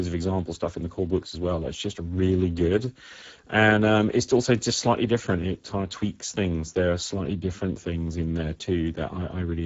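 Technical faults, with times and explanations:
Throughout, Speex codec damage: the speech has a plainly audible hoarse, noisy roughness, because this CELP coder has too few bits to model the excitation faithfully, which points to a low setting of around 10 kbps. Above 4 kHz only a shaped noise fill remains, with nothing above 7.7 kHz. A spectrogram shows smeared harmonics, a grainy, structureless upper band and a flat cut-off at 7.7 kHz.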